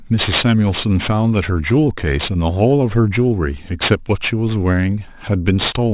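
Aliasing runs through the whole speech clip. A drop from 24 kHz to 8 kHz without filtering first folds everything above 4 kHz back down, sitting roughly 15 dB under the speech. Sibilants turn gritty and metallic rather than simply dull, which separates this from band-limiting.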